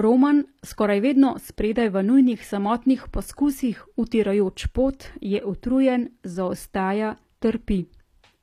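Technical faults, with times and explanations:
Throughout, HE-AAC compression: plainly audible codec damage, likely treble rebuilt from copied lower bands, fitting roughly 24 kbps; spectrogram shows a hard ceiling at 14.9 kHz.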